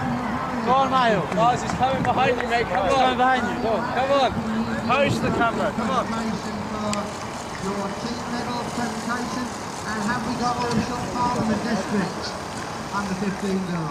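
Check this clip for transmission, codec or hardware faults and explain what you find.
Checking this clip turns up no faults to explain.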